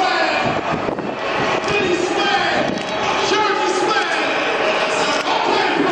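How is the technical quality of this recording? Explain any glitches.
No glitches or technical faults can be heard anywhere in this recording.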